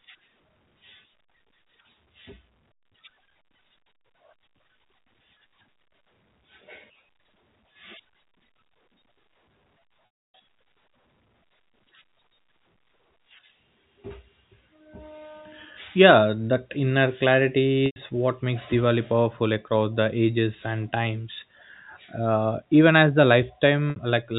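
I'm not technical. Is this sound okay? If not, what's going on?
No. At 10.29, 17.86 and 23.90 seconds the speech briefly catches on a held, buzzy sound and then fades out. This is packet loss with pitch repetition: about 280, 100 and 60 milliseconds of sound went missing in transit, and the receiver filled each gap by repeating the last bit of voice.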